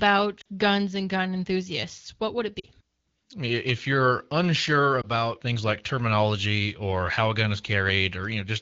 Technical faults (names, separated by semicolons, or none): lost AMR speech frames